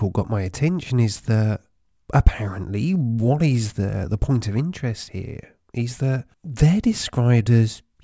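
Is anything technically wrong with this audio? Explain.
Yes. Aliasing runs throughout the speech. The audio was brought down to a lower sample rate without first filtering out content above the new limit, which fits a drop to 16 kHz with a fold point at 8 kHz. Energy from the full-band original above 8 kHz is mirrored back below it onto unrelated frequencies, at around 25 dB under the speech. Sibilants sound gritty and metallic, and the spectrum stays full right up to 8 kHz instead of rolling off.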